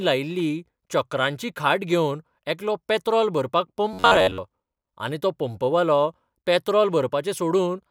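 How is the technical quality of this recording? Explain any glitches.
There's one clear glitch, right after "घेवन एकलो पॅत्रॉल भरपाक": from 3.93 to 4.38 s the speech goes robotic, from repeated short buffers. Audio likely arrived too late, so most of that stretch is a roughly 10.7 ms chunk looping, forcing a metallic 93.8 Hz buzz.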